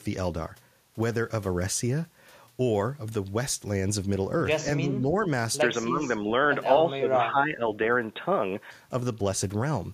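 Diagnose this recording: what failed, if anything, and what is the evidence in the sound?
The speech dips in level three times: from 4.79 to 5.22 s and 5.89 to 6.06 s by about 5 dB, and more heavily from 6.96 to 7.62 s, by about 10 dB, where it sounds partly ducked out. This is call processing, likely speech suppressed in double talk: with both ends talking, the echo canceller could not tell the near talker from the loudspeaker echo and attenuated everything, including the wanted voice.

From 5.62 s to 8.71 s the speech turns narrower and duller, then opens out again. There is no gap at either transition and the level stays about the same, but a new noise floor appears, about 45 dB below the speech. This points to the input stage, likely the input switched to a poorer device, such as a headset's call profile with its band-limited path and its own background noise.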